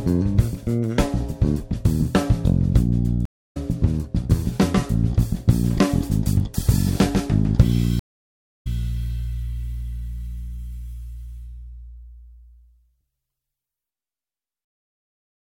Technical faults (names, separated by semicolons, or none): stream reconnect